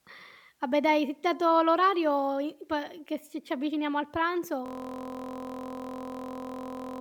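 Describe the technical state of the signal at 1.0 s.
At 1.0 s the speech signal is intact, with no dropout, distortion, glitch or other technical fault.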